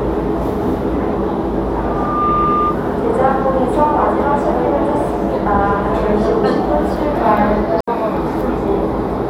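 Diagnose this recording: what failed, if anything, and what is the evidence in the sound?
A single tone near 1.2 kHz rises out of the audio at 1.81 s, swells over roughly 0.4 s to about the same loudness as the sound itself, and continues as a squeal until it stops at 2.79 s. This is loudspeaker feedback squeal, an acoustic loop in the analogue stage: the microphone was picking up the loudspeaker it fed, and at 1.2 kHz the loop gain exceeded one, so that frequency kept reinforcing itself.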